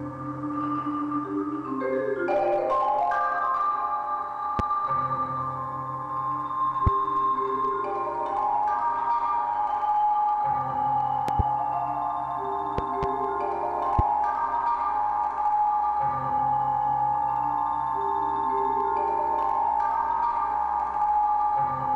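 Loud pops land at 4.59–4.62 s, 6.87–6.90 s and 13.99–14.02 s, with double pops at 11.28–11.42 s and 12.78–13.06 s, each jumping roughly 15 dB above the sound, which carries on underneath. They're likely sudden voltage spikes from a plug, switch, static or driver glitch.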